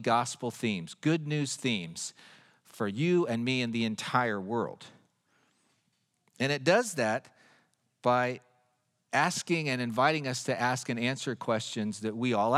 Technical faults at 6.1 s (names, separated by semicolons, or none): none